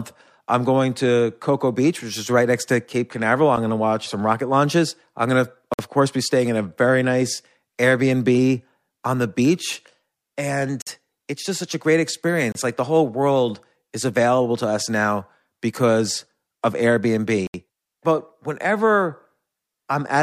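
Four short dropouts to dead silence break up this speech, at 5.74 s (about 53 ms, between "launches I'm going to" and "of course be staying"), 10.82 s (48 ms, just before "it's just such a"), 12.52 s (29 ms, right after "just such a great") and 17.47 s (71 ms). Each gap sounds like a Bluetooth stall: the sound cuts out cleanly and carries on as if it were simply paused. The likely cause is radio interference delaying packets until the headphones' buffer ran empty.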